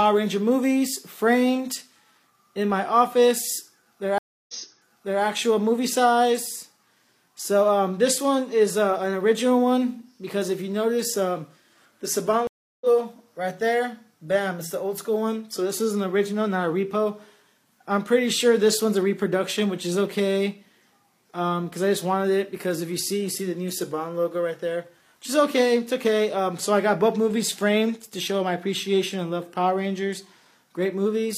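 At 4.18 s a stream reconnect breaks the sound. It goes silent for 0.30 s. A fresh decoder then picks up 0.74 s earlier, repeating material. At 12.47 s another reconnect drops out for 0.34 s. Playback resumes about a fifth of a second later, skipping ahead.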